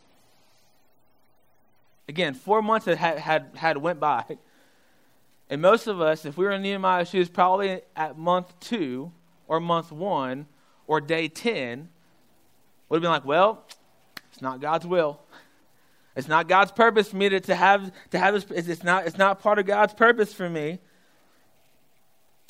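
For the first 2 seconds the sound is dull and swirly, pointing to an adaptive stream starting at a low bitrate. The spectrogram shows a low treble ceiling that suddenly jumps, with no gap, to content reaching 21.1 kHz.

Throughout, quiet passages turn grainy, likely from low bit depth without dither, fitting roughly 10-bit truncation. The error sits around 45 dB down, and the waveform shows stepped, staircase-like fades.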